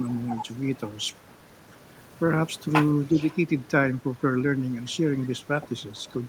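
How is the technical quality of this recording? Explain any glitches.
The recording has two call-path faults, one of them recurring.

Echo leak at 1.55–1.59, 2.86–3.37, 4.02–4.22, 5.22–5.28 and 6.0–6.1 s: a faint copy of the speech returns 354 ms late, at about -40 to -20 dB. The likely cause is a far-end echo canceller passing residual loudspeaker pickup.

Speech suppressed in double talk at 3.1–3.18 s: the speech dips by about 5 dB for roughly 70 ms, likely because the canceller attenuated everything while both sides overlapped.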